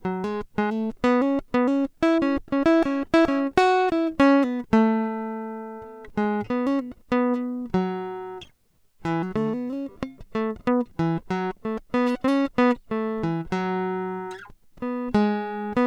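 No technical faults can be heard anywhere in the music.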